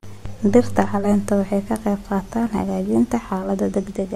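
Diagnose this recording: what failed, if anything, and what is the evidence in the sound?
At the radio reception stage, digital radio blending to analogue runs from 0.96 to 3.51 s. A 152 ms cross-fade switches to the FM signal, adding hiss about 40 dB down. The spectrogram shows the hiss. The waveform level is unchanged.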